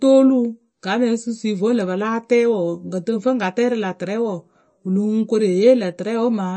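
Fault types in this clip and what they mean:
MP3 compression: watery, swirly speech with chirpy s sounds and nothing above 8.3 kHz, likely from a low bitrate that fits around 34 kbps.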